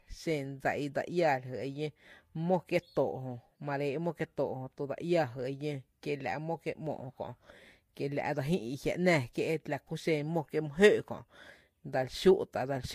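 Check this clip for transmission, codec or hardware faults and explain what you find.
One codec-related fault runs through the whole clip. Throughout, the speech carries transcoding between lossy codecs, likely an MP3 stage at around 96 kbit/s re-encoded as Vorbis at around 46 kbit/s. Nothing survives above 15.6 kHz, and the second encoder wastes bits on the first one's artefacts and adds its own. Unlike a single low-bitrate encode, two distinct artefact textures overlap.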